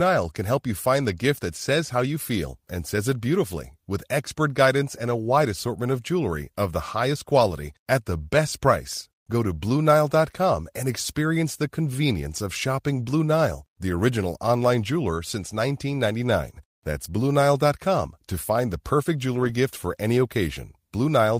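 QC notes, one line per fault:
19.35–19.53 s, lost packet rebuilt from error correction: before "gift for any", lost packets were replaced by low-bitrate redundant copies, so the speech has no gap but sounds rougher and noisier.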